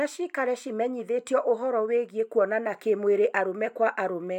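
Listening to the speech recording, nothing stood out as a technical problem at any point.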